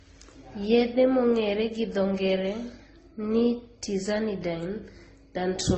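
From the very start to the end, the speech has that muddled, stacked-up quality you get from transcoding between lossy codecs. Nothing gets through above 9.1 kHz, so the top is dull the whole way, and on top of that the different codecs' artefacts are heard together, where each encoder has spent its bits on the previous one's artefacts. The mix of artefacts fits a likely chain of low-bitrate AAC and MP3 finishing in Opus.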